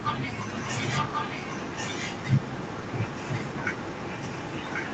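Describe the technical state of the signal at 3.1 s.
At 3.1 s you're inside an echo leak that runs from about 0.53 s to the end. A copy of the speech comes back roughly 1.09 s late, only a little quieter than the original, likely because a far-end loudspeaker's echo canceller let its microphone pickup slip through.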